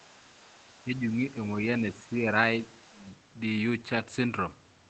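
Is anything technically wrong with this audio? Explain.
Yes, there are three kinds of fault.

From 0.0 to 0.99 s and again from 2.62 to 3.11 s, there is other-side voice leaking through. A faint second voice sits about 30 dB below the main talker. The likely cause is the talker's loudspeaker feeding the microphone, with the echo canceller leaving a residue.

Speech is suppressed in double talk at 0.82 to 1.03 s and 2.91 to 3.03 s. Both overlap the leaking voice. The talker's level dips by about 5 dB in the first and about 10 dB in the second. Each dip lasts roughly a tenth of a second. This is likely the echo canceller turning everything down when it cannot separate the two voices.

From 3.95 to 4.09 s, a lost packet is rebuilt from error correction. About 80 ms of audio was replaced by low-bitrate copies carried in the following packets, which fits four separate lost packets. There is no gap, but this stretch sounds rougher and noisier. 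The call runs through Opus at 24 kbps with audio up to 8 kHz.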